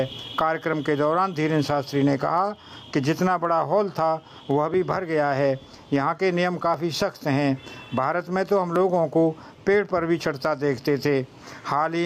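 Gain pumping runs through the whole clip: the gain swings about 15 dB, leaving loud and soft passages squashed together. This is likely input gain set far too high, with a fast limiter repeatedly pulling it down.

Periodic USB or driver dropouts appear every 2.0 s from 0.73 s to 10.78 s, each a short tick where about a millisecond of audio is skipped. The even spacing points to a background task regularly stalling the USB bus or audio driver.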